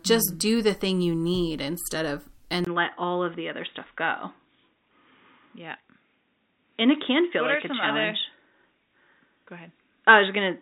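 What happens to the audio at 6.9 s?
At 6.9 s the recording is running on what is likely a poorer input device, after an input switch at 2.65 s, marked by a 20 ms gap, that lasts to the end of the clip. The new path passes nothing above 3.8 kHz, so the speech sounds dull and boxy, with its upper clarity gone. The level stays about the same, and a faint new background noise sits roughly 50 dB below the speech.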